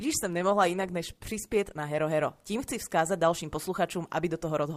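From the very start and running the whole way through, there's a grainy distortion riding on the speech, sitting roughly 45 dB down and tracking the level, so quieter syllables get gritty. That's likely low bit depth without dither, around 10 bits, truncated rather than rounded.

Over the first 2.0 s you also get the adaptive stream starting at a low bitrate. The treble's thin and codec artefacts are stronger, which fits something like a 16 kbit/s Opus stream. At 2.0 s it jumps cleanly, no gap, to much fuller sound reaching about 20.2 kHz, consistent with roughly 64 kbit/s.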